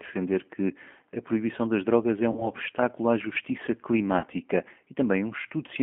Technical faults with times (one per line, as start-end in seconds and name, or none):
0.00-5.83 G.729 codec
2.32-2.50 VoIP packet loss concealed by the speech codec
4.19-4.27 VoIP packet loss concealed by the speech codec